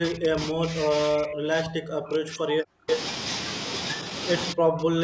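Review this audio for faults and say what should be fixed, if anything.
From the start to 2.89 s, and again from 4.53 s to the end, the speech dips sharply, by around 40 dB at its deepest. This is speech suppressed in double talk, likely because the echo canceller confused the talker with loudspeaker echo while both sides spoke.

Between 2.90 and 2.96 s, a brief scrap of the voice returns delayed by 324 ms, roughly as loud as the speech itself. This is an echo leak, likely where the loudspeaker side's canceller let part of its loudspeaker pickup back into the call.

Better acoustic echo cancellation with reliable double-talk detection, or a headset at the far end, would prevent both.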